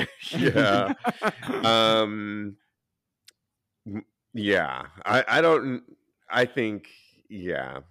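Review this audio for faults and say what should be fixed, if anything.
Hard clipping, 0.45 to 1.28 s: peaks exceed a stage's limit by about 4 dB, leaving flat-topped waveform peaks and high-harmonic smearing on the spectrogram. Lower the gain ahead of that stage so the loudest peaks keep some headroom.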